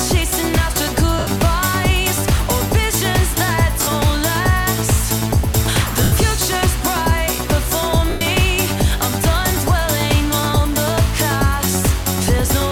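At 1.19 s, 3.82 s, 6.03 s and 8.10 s the sound breaks into a brief noisy smear, lasting 80, 50, 90 and 110 ms. These are lost LE Audio frames: the LC3 decoder fills each gap by repeating the last good spectrum with randomised signs and fades it after the first few frames. The gap lengths fit runs of 10 ms frames. The clip's light lossy compression sits underneath, adding at most a faint watery texture on noise and attacks.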